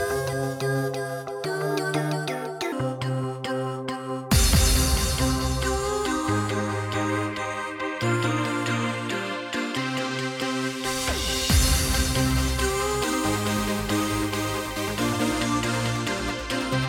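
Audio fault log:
0 to 2.72 s, section at the wrong speed: the opening runs about 1.3 times too fast, so everything comes out hurried and lifted by roughly five semitones, with pitch and tempo shifting together. That's likely a clock mismatch at playback or edit, before normal speed takes over.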